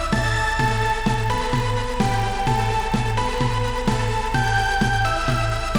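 The sound carries a 50 Hz buzz wherever there is signal, the mark of a resampler restarted on every block: each 20 ms block was converted from 24 kHz to 48 kHz in isolation, leaving a small step at every edge. A spectrogram shows evenly spaced vertical striations, and the waveform shows tiny discontinuities every 20 ms.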